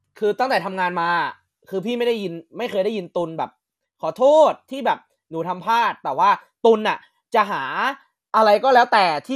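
Speech clip with MP2 compression damage throughout. It sounds dull, with gurgling, granular distortion as upper bands drop out. That likely points to a low bitrate, around 80 kbps.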